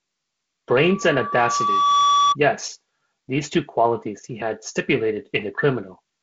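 From 0.73 s to 2.36 s a loudspeaker feedback squeal rises out of the speech: a single tone near 1.2 kHz that swells over roughly a second and a half until it sits about 5 dB above the voice. The microphone was picking up its own loudspeaker, and at that frequency the loop gain passed one. Unlike a steady whistle or interference tone, it starts faint and keeps climbing. The G.722 wideband coding keeps the squeal and voice below about 7.8 kHz.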